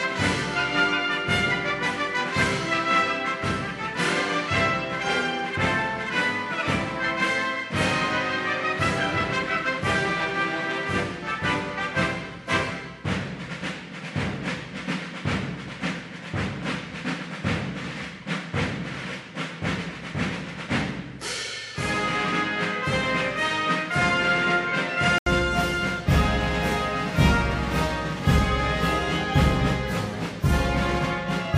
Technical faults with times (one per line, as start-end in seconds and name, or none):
0.00-25.26 input switched to a poorer device